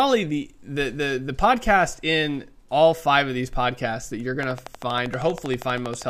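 From 4.43 to 6.03 s a steady ticking rides over the speech, about 12.6 clicks per second, around twenty evenly spaced pops standing well clear of the signal. This train of clicks likely comes from interference or a faulty connection injecting repeated pulses.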